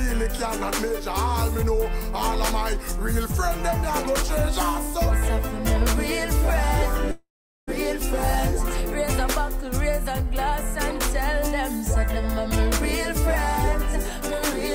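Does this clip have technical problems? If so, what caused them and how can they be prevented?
Yes. From 7.11 s to 7.69 s the sound turns into a fading buzz that trails off into about 0.41 s of near-silence, and the audio then resumes with roughly 0.56 s of material simply gone. This is a long network dropout, likely caused by a run of packets that never arrived, so the receiver stretched the last sound to cover the gap until it died away. A more stable connection with forward error correction or retransmission would prevent it.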